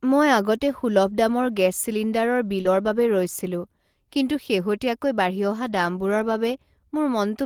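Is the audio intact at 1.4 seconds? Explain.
Yes, the audio is intact at 1.4 seconds, with no dropout, click, distortion or other fault audible at that point.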